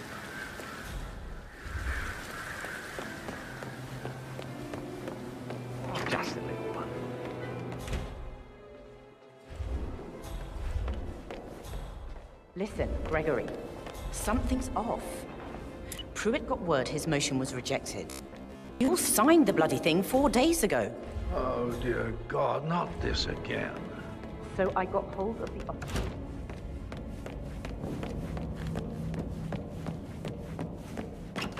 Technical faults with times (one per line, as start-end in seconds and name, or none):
18.10-18.88 robotic sound from repeated short buffers